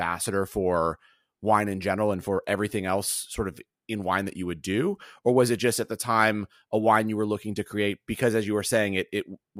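Nothing to flag here, just a speech recording with no technical faults to point at anywhere along its run.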